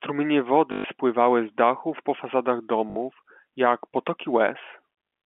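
At 0.72 s the speech breaks into a robotic stutter lasting 120 ms, until 0.84 s. This is packet loss with the last packet repeated. Data went missing, and the receiver replayed the last packet it had to fill the gap. The run buzzes at about 50 Hz, which fits 20 ms packets. A shorter 60 ms stutter follows at 2.9 s, ending at 2.96 s. The telephone band from 200 Hz to 3.4 kHz stays intact around both.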